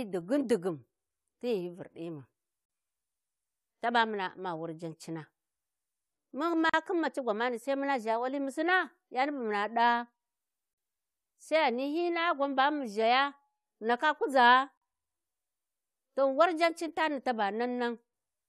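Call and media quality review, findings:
Gap at a join of encoded pieces, four occurrences in speech: 2.65–2.70 s, 6.70–6.74 s, 10.74–10.78 s, 14.78–14.82 s. Dropouts of about 40 ms, repeating every 4.0 s. Silences with edges smeared by the codec; audio resumes exactly where it stopped. Probable component: segmenting encoder or concatenation step. Mechanism: 4 s chunks encoded independently and joined untrimmed, so each join keeps end-of-chunk frame padding plus the next chunk's encoder start-up delay.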